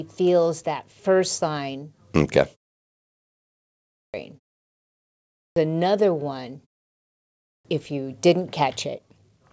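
At 3.56, 4.95 (before "another one") and 7.02 s (before "if you didn't"), each clipped start after a pause loses about 0.6 s as the sleeping output device wakes late. From 8.58 to 9.51 s, after "if you didn't", a jitter buffer speed-up trims around a tenth of a second in pitch-period slices, so the G.722 call audio runs 109% fast at unchanged pitch.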